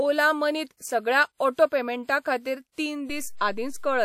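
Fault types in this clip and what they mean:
DC step: the waveform's zero line jumps to a new offset at 3.10 s, as happens when a converter recalibrates or an offset input is switched in, and it holds to the end of the clip; the step is heard as a low thump or click while the speech carries on unchanged.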